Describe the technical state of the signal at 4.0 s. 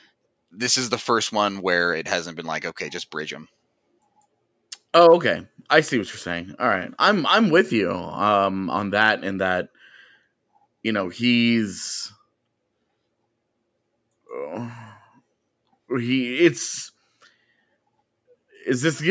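At 4.0 s the speech is intact, with no fault audible, only the expected call microphone processing that trims the lowest bass and leaves nothing above 8 kHz.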